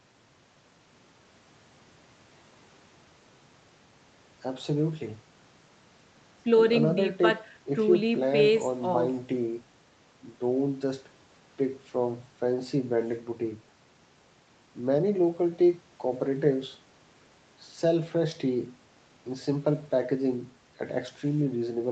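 Nothing here counts as a fault; the speech just carries the ordinary marks of a call line, with the lowest bass trimmed by the microphone's high-pass filter and nothing above 8 kHz, which fits an Opus codec running at a narrowed bandwidth, and that's simply how this kind of connection sounds.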